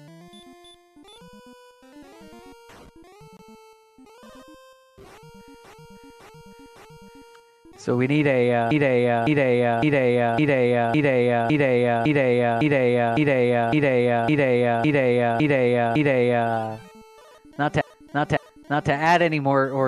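From 5.64 to 7.32 s, 8.71 to 16.51 s and 17.81 to 18.93 s, the same 0.56 s block plays again and again (three, fourteen and two extra times), which fits a run of six compressed frames being repeated. These are repeated frames: a stutter, and the audio grows longer by each repetition. That separates it from a dropout, which removes material, and from jitter, which smears timing.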